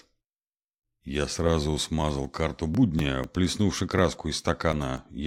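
From 2.00 to 4.97 s, periodic USB or driver dropouts skip a couple of milliseconds every 0.25 s, giving regular ticks that show as evenly spaced waveform jumps and thin vertical spectrogram lines.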